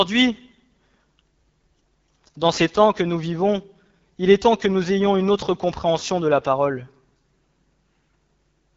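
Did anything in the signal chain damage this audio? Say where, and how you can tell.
Yes. An AMR wideband (HD Voice) codec damages the speech at the codec stage throughout. Nothing reaches above 7.4 kHz, and the speech has a plainly audible rough, raspy texture, which fits one of the lowest AMR-WB modes, around 8.85 kbit/s.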